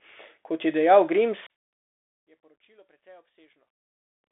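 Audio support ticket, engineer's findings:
Bluetooth CVSD headset codec, whole clip: speech confined to about 300 Hz–3.6 kHz, nothing above 3.8 kHz. The spectrogram shows a hard ceiling and granular hiss floor, and the s sounds are scratchy from step-size overload.

One channel inverted, 1.47–4.24 s: level falls about 34 dB and the speech nearly disappears, with the waveform collapsing almost flat. Likely cause is reversed polarity on one stereo channel, so the common content cancels in the mono sum.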